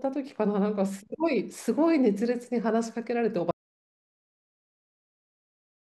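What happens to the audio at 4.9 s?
An audio dropout to silence covers 3.51 s to the end; the input was likely lost mid-recording, so 4.9 s is dead silence, with no room tone.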